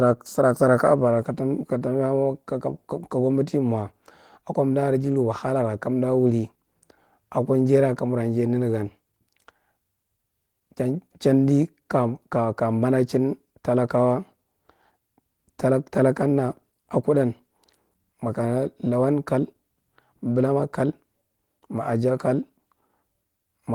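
No technical faults turn up anywhere in this speech recording. Opus voice compression is audible only as light coding damage, with the band reaching about 20.2 kHz, which fits hybrid fullband coding at around 20 kbps.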